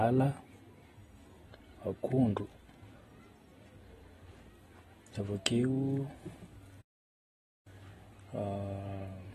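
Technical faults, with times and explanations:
Throughout, AAC compression: likely a low-bitrate AAC-LC encode, around 32 kbps, quantising each frame's frequency lines coarsely, so nothing survives above about 12.5 kHz and the speech sounds dull and smeared, with a plainly audible warbling, fizzy texture on sustained sounds and sibilants.
6.81 to 7.67 s, playback stall: the player likely ran short of data or its thread was held up, so output dropped to silence for about 0.84 s mid-flow before resuming, leaving an abrupt gap in the speech rather than a fade or glitch.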